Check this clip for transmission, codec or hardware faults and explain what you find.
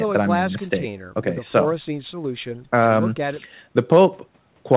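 No transmission, codec or hardware faults are present: the speech carries the expected signature of a telephone call path, with the lowest bass removed by the call microphone processing and nothing above 4 kHz, which fits narrowband G.711 mu-law coding at 64 kbps.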